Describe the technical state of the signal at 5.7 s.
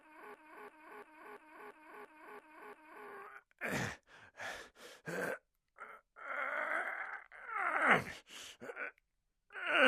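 No fault can be heard at 5.7 s; the signal is intact at that moment.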